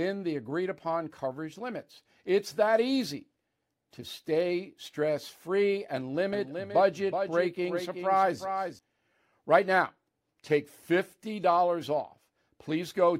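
A doubled audio track runs from 6.33 s to 8.79 s, starting just after "stay stress free and". A second full-band copy of the speech trails the original by around 400 ms, roughly 10 dB quieter, with no reverberant tail or room colouring. It cuts in and drops out abruptly at those points. It was likely caused by a slower capture path recording the same signal again, or by an edit leaving two offset copies stacked.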